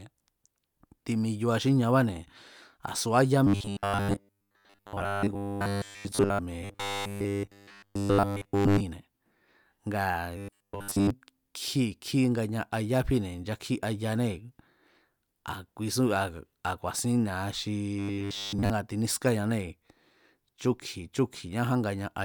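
Robotic sound from repeated short buffers appears after "a̱ subá ya" at 3.47–6.39 s, then 6.64–8.81 s, 10.37–11.10 s and 17.99–18.70 s. The speech becomes a rigid 100 Hz metallic buzz, most complete in the second stretch. The likely cause is a starved stream looping a 10 ms buffer.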